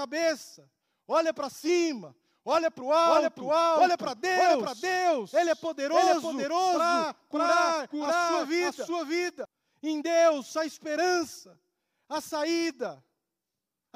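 Speech with a doubled audio track from 3.05 to 9.45 s: an equally loud copy trails by roughly 0.7 s, switching on and off abruptly, without the decay of an echo. The cause is likely a second, slower capture path.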